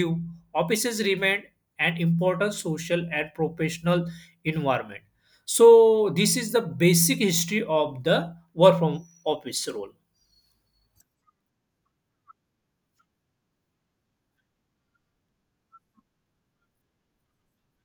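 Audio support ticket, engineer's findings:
Speech signal checked with no technical faults found, and no action needed on the audio path.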